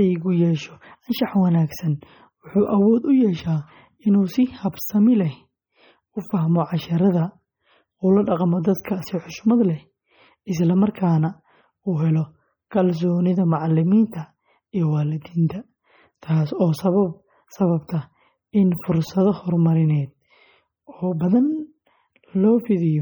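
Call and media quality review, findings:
Throughout: watery, swirly speech with metallic chirps on s sounds and smeared onsets; likely MP3 compression at heavy damage, pointing to about 32 kbps. Weak frequency lines toggle between frames, unlike steady broadband noise.

Pre-echo at 4.72 s, 14.10–14.12 s, 17.87 s and 21.19 s: a short hiss of 13 to 21 ms lands just before attacks. Block-spread quantisation noise precedes the onset rather than following it, unlike a click.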